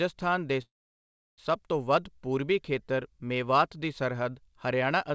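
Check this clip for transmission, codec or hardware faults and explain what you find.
One transmission fault stands out in this speech clip, heard through a G.722 call path with nothing above 8 kHz.

A call audio freeze runs from 0.62 to 1.40 s. Packets were likely delayed and the jitter buffer ran dry, so the receiver stretched the last sound into a brief fading buzz or hiss, then about 0.69 s of silence. Speech resumes intact at "ਤੋਂ ਵੱਧ ਪੂਰਬੀ ਖੇਤਰ", about 0.76 s later than it would have arrived.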